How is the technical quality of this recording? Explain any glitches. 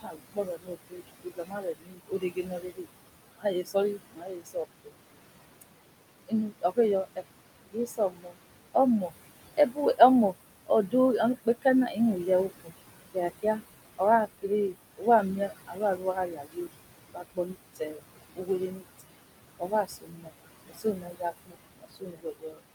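Technical quality is held back by the noise suppression, which is doing too much here.

Noise suppressor artifacts run through the whole clip. The suppressor pulls down what it judges to be steady background by about 20 dB, frame by frame. So the room noise, sitting about 11 dB under the speech, dips between phrases and comes back underneath them.

Speech cut by the noise suppressor happens from 0 to 4.91 s and again from 6.28 to 22.62 s. The suppressor mistakes quieter parts of the speech for noise and ducks them along with the background, by up to about 21 dB in the first stretch and 22 dB in the second. That adds up to roughly three seconds and five seconds of affected speech. Soft consonants and word endings come out swallowed or faint.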